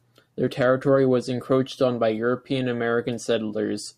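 No technical faults are audible anywhere in the recording.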